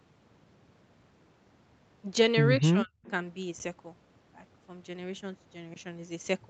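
From 2.58 to 2.97 s the speech sinks by roughly 35 dB in uneven pieces, likely speech suppressed in double talk. The echo canceller was unsure whose sound it heard and ducked the talker too, unlike a dropout's hard gap. At 3.04 to 3.11 s a faint copy of the voice returns about 199 ms late and about 25 dB down, likely an echo leak. The canceller let loudspeaker pickup through, heard as a delayed ghost rather than reverb. At 3.59 s and again from 5.74 to 5.76 s, a block of digital silence (10 ms, then 20 ms) cuts out with no fade. The 10 ms block is short enough to come across as a tick or dip rather than silence.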